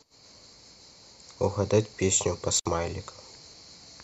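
A loose connection opens for 61 ms at 2.57 to 2.66 s, an intermittent contact that cuts the speech with edge crackle and faint hiss.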